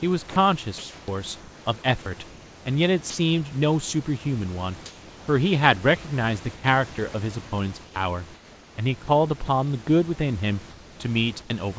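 At 0.30 to 0.36 s a brief piece of the speech, about 30 ms, drops into a steady hiss. This is sound dropped by the voice detector, which likely judged quiet sound as background and stopped sending. The receiver filled the gap with synthetic noise. From 0.30 to 1.08 s the room's textured hiss turns flat and featureless. That is comfort noise in place of the background, likely generated while transmission paused.

The same clipping, likely by the voice detector, returns at 3.10 to 3.18 s, where about 80 ms of speech disappears under noise.

Comfort noise fills the pauses again at 4.86 to 5.28 s, where the background, about 23 dB below the loud speech, becomes smooth and about 2 dB quieter. It does so again at 10.70 to 11.50 s.

Between 6.56 and 9.48 s the speech turns choppy. This is sound chopped by the voice detector. It likely toggled sending repeatedly and swapped about 0.8 s of quiet edges for fill.

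Nothing is heard above 8 kHz, which fits a G.722 call link. The room noise sits about 24 dB below the speech.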